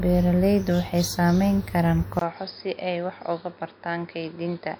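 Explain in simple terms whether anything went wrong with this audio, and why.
Something does go wrong at about 2.19 s: there's a short gap of roughly 20 ms, and from there to the end the sound gets duller and boxier, with nothing above about 5.1 kHz, a noticeable drop in loudness, and a new background noise sitting well under the speech. That fits an input switched to a poorer device, most likely the recorder jumping to another mic or a headset's call mode partway through.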